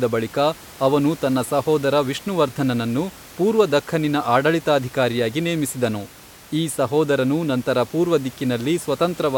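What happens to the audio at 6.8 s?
At 6.8 s the speech passes through intact, with only the room noise underneath, sitting about 22 dB below it.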